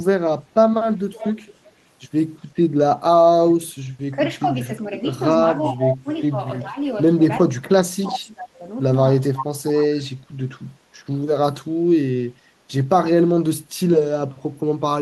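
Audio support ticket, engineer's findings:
Echo leak at 1.13–1.69, 5.82–6.31 and 8.11–8.19 s. Delayed speech copy, 372 ms behind, faint to nearly full level. Likely the far-end echo canceller passing residual loudspeaker pickup.

Speech suppressed in double talk at 4.15–4.69, 5.68–6.79, 7.47–8.66 and 9.28–10.46 s. Level dips, slight at first, later very deep. Likely the echo canceller ducking the talker during overlapping speech.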